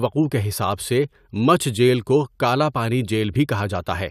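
Nothing in this recording of speech stood out as a technical fault on listening.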